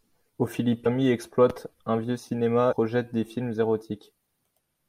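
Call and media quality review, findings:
Damaged data in a compressed stream at 0.85 s, just before "exploite un vieux", and 2.71–2.73 s, just after it. Decoder loses frame sync, resyncs. Short chirp, squawk, click or hole.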